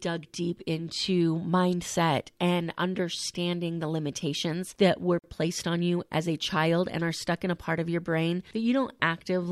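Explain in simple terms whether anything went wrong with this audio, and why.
Something did go wrong: a gap at a join of encoded pieces. Between 5.19 and 5.24 s, right after "the limitations that were", the speech stops for about 46 ms, then resumes with "placed on you as". Unlike a dropout, nothing is lost; the audio was encoded in separate pieces, likely about 6 s long, and the silence each encoding adds was left in.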